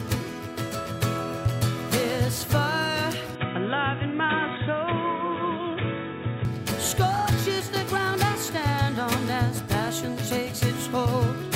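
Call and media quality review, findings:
Input switched to a poorer device, 3.35–6.45 s. Sound turns dull and boxy. Nothing above 3.8 kHz. New background noise, roughly 30 dB below signal. No gap, no level jump. Likely a narrowband fallback mic, then restored.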